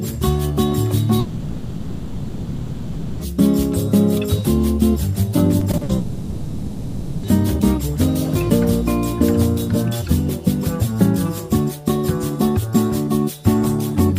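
Long network dropout, 1.19 to 3.21 s: about 2 s of audio is replaced by a stretched, fading continuation of the last sound, likely because no packets arrived. Sound resumes later with that part lost.

Repeated packet loss (robotic sound), 5.59 to 5.91 s: four short holes, the longest 60 ms, are each patched by repeating the preceding sound. The patches cover 140 ms, 44% of the stretch, giving choppy, robotic audio.

Long network dropout, 5.97 to 7.25 s: likely a second run of lost packets, leaving 1.26 s of drawn-out, fading fill with no silence. Audio returns afterward without the missing portion.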